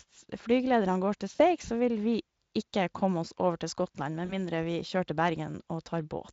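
Speech coded with Speex, with light codec colouring, has VoIP packet loss concealed by the speech codec at 1.35–1.41 s and 4.25–4.34 s. Each gap, about 40 ms and consistent with two lost 20 ms frames, is filled with a fading extrapolation of the voice, a buzzy tone or coloured noise, and the voice stays weak or distorted for tens of milliseconds afterwards.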